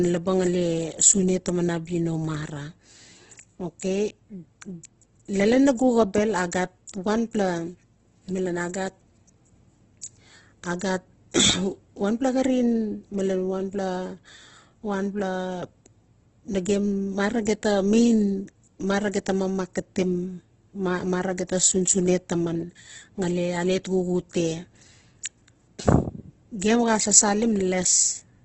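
Throughout, the speech sounds grainy and rough with nothing above 8.2 kHz. This heavy damage points to a very low bitrate, likely from Opus compression in its CELT mode.

At 6.87 s, 10.79 s and 17.45 s, a brief hiss smears in just before sharp attacks. This is pre-echo: quantisation noise spreads 12 to 18 ms ahead of each onset.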